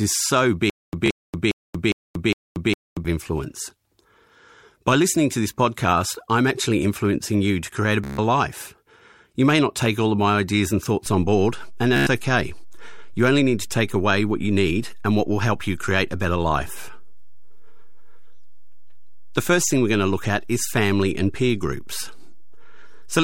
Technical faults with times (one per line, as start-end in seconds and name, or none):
0.70-3.05 stutter with silent gaps
1.06-1.09 Bluetooth stutter
8.04-8.18 Bluetooth stutter
11.06-23.23 DC step
11.96-12.07 Bluetooth stutter
17.45-17.51 Bluetooth stutter